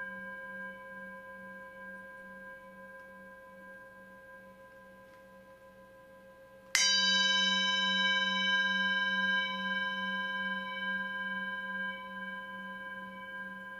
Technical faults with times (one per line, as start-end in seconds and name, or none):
none